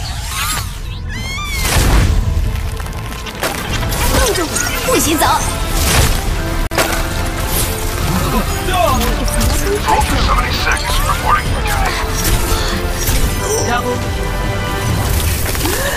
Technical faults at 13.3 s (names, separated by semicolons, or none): none